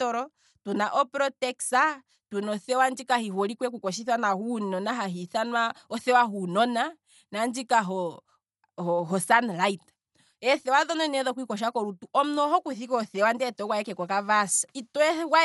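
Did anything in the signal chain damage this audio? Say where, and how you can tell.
Yes. Dolby Digital compression damages the speech throughout, at the codec stage. Nothing sounds above 11.5 kHz, and a rough, fluttering noise clings to tonal parts. The likely cause is an encoder starved of bits, which fits about 64 kbps, leaving frequency lines empty that the decoder fills with dither noise.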